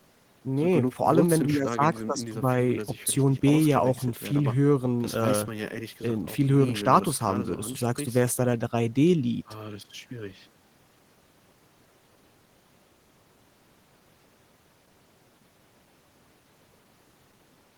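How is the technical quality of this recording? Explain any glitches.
The recording's technical quality is sound, with no glitches or faults audible anywhere in the speech.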